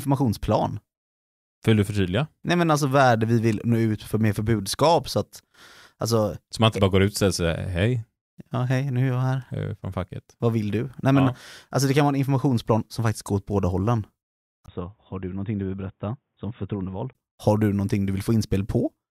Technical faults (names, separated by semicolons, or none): input switched to a poorer device